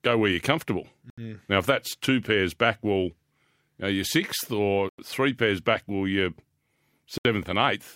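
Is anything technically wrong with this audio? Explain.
Yes. The speech drops out three times, at 1.1 s, 4.89 s and 7.18 s. The first comes after "go where you're comfortable" and lasts 75 ms. The second falls between "know you're sixth or" and "three pairs back well" and lasts 94 ms. The third lasts 71 ms. Each gap is clean silence, then the sound resumes. This is likely a Bluetooth stall. Interference delayed packets, the headphones' buffer emptied, and playback paused until resent data arrived.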